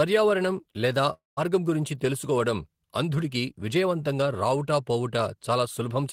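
At 1.13 s the speech breaks off until 1.39 s. The last sound stretches into a fading buzz, goes silent for about 170 ms, then picks up at "గురించి తెలుసుకోవడం అంధుడికి విజయవంతంగా" with around 240 ms missing, likely a long network dropout.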